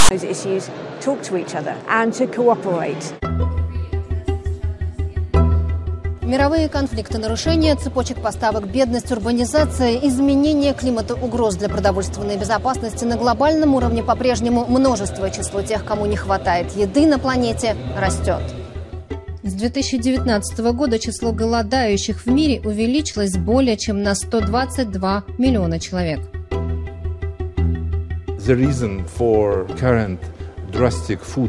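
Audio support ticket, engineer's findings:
File tags played as audio, 0.00–0.11 s: hard-edged rasp, then brief silence. Decoder reads a text tag block and its zero padding as samples. A dropout or codec glitch wouldn't show this offset, buzzy texture.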